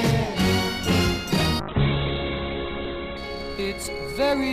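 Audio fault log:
1.6–3.24 s call bitrate drop: highs cut from 20 kHz to 4 kHz, sound turns coarse and watery, consistent with roughly 11 kbps; unbroken, unlike packet loss.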